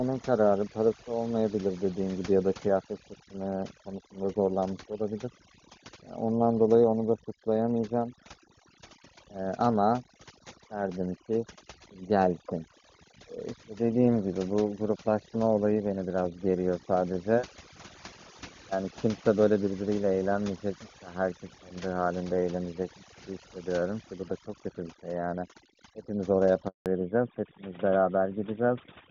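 Overdone noise removal runs through the whole clip. The noise reduction is set far too strong, so frequency bands sitting near its noise estimate are pushed down or switched off, and quieter parts of the speech go with them. The background sinks and breaks up into twinkling specks.

A handover gap follows from 26.68 to 26.86 s. While the call moves between networks, no speech frames arrive for 180 ms. The voice dies away within a few tens of milliseconds and stays silent until the new link picks up, and whatever was said in that stretch is lost.

Fallback to narrowband starts at 26.86 s and lasts to the end. Before this point the speech carries clear HD Voice high frequencies, consistent with the top AMR-WB rate. After it, everything above 4 kHz is gone, which fits a drop to the older AMR-NB codec, and the voice turns duller and rougher.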